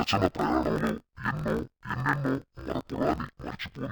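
From start to finish the speech sounds an octave low, dull and robotic, with a buzz at 45.9 Hz. This is interleaved audio read as planar: each 21.77 ms block of alternating left and right samples is split into halves, each played at half speed.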